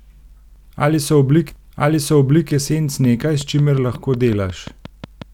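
A speech recording with two faults. From 1.49 to 2.49 s a stream segment is repeated: one full second replays intact after a small blip, unlike an echo, which would decay. From 3.04 to 5.23 s a train of clicks ticks regularly at 5.5 per second, around fifteen similarly shaped pops peaking about 5 dB above the speech and continuing through pauses, which rules out random crackle. The likely cause is interference from nearby equipment.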